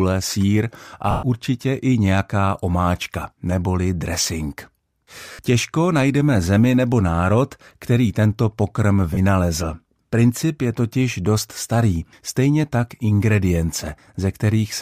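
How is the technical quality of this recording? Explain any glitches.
The recording has three dropouts from lost LE Audio frames, at 1.11 to 1.23 s (120 ms), 5.32 to 5.39 s (70 ms) and 9.14 to 9.18 s (30 ms). The gap lengths fit whole 10 ms frames, as expected for audio that likely came over Bluetooth LC3 compression. When frames go missing, the decoder fills each gap by repeating the last good spectrum with randomised signs and fading it after a few frames. Each gap therefore comes out as a brief grainy smear in place of the speech, not a hard click. In the 120 ms gap the smear fades toward silence before the speech returns.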